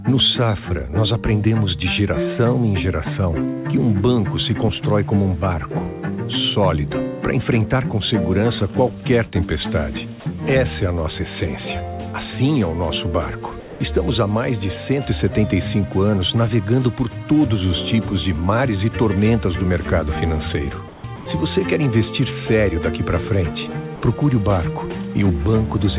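At 13.6 to 13.8 s the sound is cut off and 0.2 s of steady hiss takes its place, losing about 90 ms of real sound. This is sound dropped by the voice detector. The sender most likely judged a quiet stretch to be background and stopped transmitting, so the receiver filled in comfort noise. On a spectrogram the detailed pattern breaks into a flat, even wash until the sound resumes.

From 20.88 to 21.04 s the real background, which sits about 21 dB below the loud parts, is swapped for comfort noise in place of the background, about 3 dB quieter. This most likely comes from discontinuous transmission, where the sender goes silent during a pause and the receiver substitutes smooth synthetic noise. The waveform shows a small step down in level, and the spectrogram shows the background's texture turning into a uniform grey band below the 4 kHz ceiling of the narrowband call path.

The detector drops sound twice more. 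At 21.16 to 21.26 s, 100 ms goes, and at 23.96 to 24.02 s, 60 ms goes, each time replaced by the same featureless noise and each likely caused by sound misjudged as background. Both appear as brief, clean-edged patches where the spectrogram's structure vanishes.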